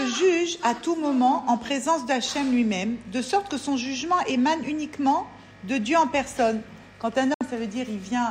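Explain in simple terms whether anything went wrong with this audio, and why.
Near the end, at 7.34 s, the sound drops out for about 70 ms and returns at 7.41 s. This is a digital broadcast dropout: the receiver lost the signal or got damaged data, briefly muted with a very quick fade, and discarded what was lost, roughly two frames' worth.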